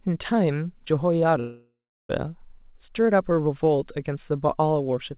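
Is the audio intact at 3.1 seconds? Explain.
Yes, the speech at 3.1 seconds is intact, passing through the WebRTC call path with the narrowband sound of a G.711 mu-law link that carries nothing above 4 kHz.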